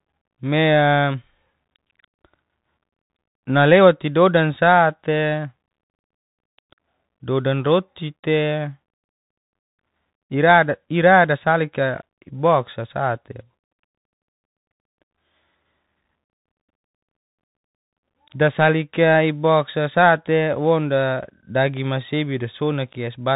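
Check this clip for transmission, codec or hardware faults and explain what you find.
One codec fault runs through the whole clip. Bluetooth CVSD headset codec, throughout: speech is cut off above 4 kHz, and 1-bit delta steps lagging loud highs leave scratchy s sounds and granular hiss, consistent with a 64 kbps stream. Unlike a plain low-pass filter, this adds the gritty slope-overload edge and hiss.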